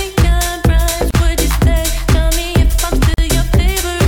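At 1.11 s the sound drops out for about 34 ms, and at 3.14 s it drops again for about 43 ms, ending at 3.18 s. The two events are 2 s apart. Each is a gap at a join of encoded pieces. Separately encoded segments were butted together with their encoder start-up delay and final-frame padding left in. On a waveform each shows as a flat strip with smeared edges, and on a spectrogram as a thin vertical blank band. The sound resumes where it stopped.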